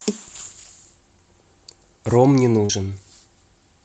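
At 2.65 to 2.71 s, short concealed packet loss: about 40 ms of speech never arrived, so the decoder extended the preceding sound, leaving a brief smeared wobble.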